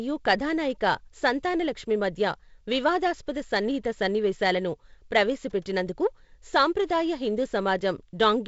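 No technical faults turn up anywhere in this speech. It has passed through G.722 wideband telephone coding at 48 kbit/s, so nothing is present above 7.7 kHz, and the light coding wear shows as a faint hiss in the upper band and a slightly noisier lower band.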